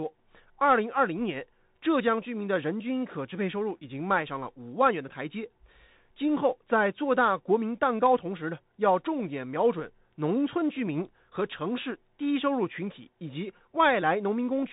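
Speech carrying Bluetooth CVSD headset codec damage throughout: content stops near 3.8 kHz, so the spectrogram shows a hard ceiling with granular hiss between syllables, and sibilants sound scratchy, which fits 64 kbps delta modulation.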